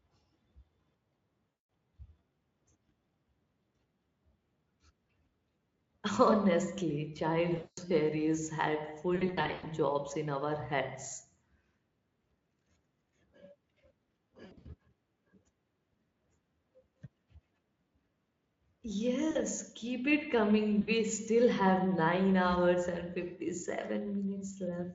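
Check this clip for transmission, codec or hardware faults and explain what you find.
There is one kind of fault: VoIP packet loss concealed by the speech codec. It occurs six times, at 1.66 s, 7.57 to 7.81 s, 9.15 to 9.70 s, 14.45 to 14.69 s, 19.31 to 19.37 s and 20.81 to 20.89 s. The 9.15 s event ends just before "jobs in our heads". The last two fall before and after "keep it". The 20.81 s event ends before "still have". The first two events each drop 200 ms of audio. Losses at 9.15 s and 14.45 s are scattered, with the longest gaps 100 ms and 60 ms. The last two are short, 40 ms and 60 ms. When packets go missing, the decoder repeats its last pitch and filter and lowers the gain frame by frame. The gaps turn into a buzzy, stretched tone or coloured noise that fades. The voice stays weak briefly after packets return. The Speex codec itself, at 34 kbps, adds no more than faint damage.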